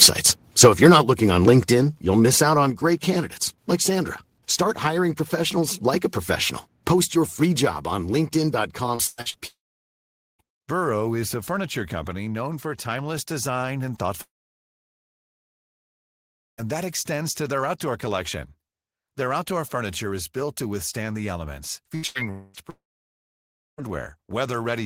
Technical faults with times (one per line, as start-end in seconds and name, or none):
1.68 microphone volume stepped down
2.70 microphone volume stepped down
8.95-9.40 repeated packet loss (robotic sound)
9.47-10.42 long network dropout
14.23-16.69 long network dropout
21.95-23.85 repeated packet loss (robotic sound)
22.31-23.89 long network dropout